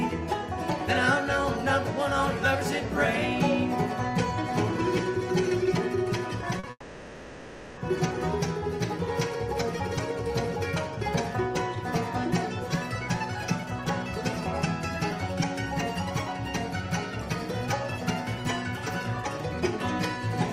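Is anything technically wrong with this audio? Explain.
Yes, there are two faults, close together.

Short stall from a late packet, 6.59 to 6.65 s. A packet arrived late and the jitter buffer ran dry, so the receiver held the last bit of sound for about 40 ms until the data caught up, then continued from exactly where it paused. Nothing is lost, but the sound is briefly drawn out with a faint buzzy smear, and everything after it now plays 40 ms later.

Call audio freeze, 6.70 to 7.79 s. Here the sound stops progressing for about 1.07 s. The likely cause is a run of packets held up in transit, leaving the buffer empty for much longer. The receiver fills the wait by extending the last sound into a decaying buzz, ending in roughly 30 ms of silence. When the audio resumes it picks up where it left off, so no content is missing, but over a second of dead time has been inserted.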